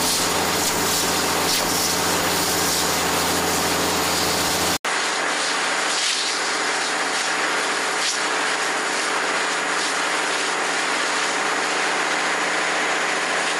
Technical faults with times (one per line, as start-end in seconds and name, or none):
4.77-13.60 input switched to a poorer device